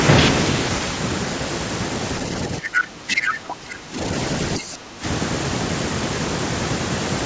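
A speech recording where the echo canceller on the call likely lost track during double talk, when both sides spoke at once, and turned the near talker down along with the echo. The result is speech suppressed in double talk: from 2.48 to 3.99 s and again from 4.59 to 5.05 s the voice dips by up to roughly 15 dB. The same canceller also likely failed to remove all of the loudspeaker signal from the microphone, so the other side's voice leaks through in two short scraps, at 2.75 to 2.84 s, a little louder than the talker, and at 3.18 to 3.34 s, at about the same level. Both scraps land inside the first suppressed stretch. The call's microphone processing, which passes nothing above 8 kHz, is working normally.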